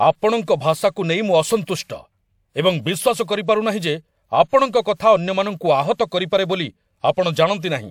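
Pre-echo appears at 1.65 to 1.67 s and 5.94 to 5.99 s. Codec noise spreads ahead of sharp attacks, leaving a brief hiss and softening them.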